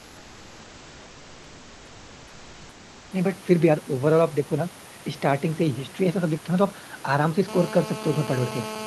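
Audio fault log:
0.00–3.11 s, comfort noise in place of the background: the background is a steady, featureless hiss, about 2 dB quieter than the real room tone that follows, with none of its detail. Unlike a noise gate, the sound never drops to silence. The likely cause is discontinuous transmission in the Opus call codec, with synthetic noise filling the pause.
7.48–8.87 s, GSM phone buzz: a hard, raspy buzz at 217 Hz with dense harmonics, about 12 dB below the signal and steady to the end. That steadiness fits a phone in an active call. Its pitch and gritty edge set it apart from smoother 50 or 60 Hz mains hum.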